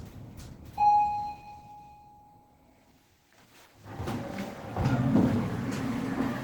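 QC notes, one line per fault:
throughout: Opus compression, plainly audible; the sound is muffled, hoarse and grainy, likely from Opus falling into its hybrid speech mode at a low rate near 16 kbps.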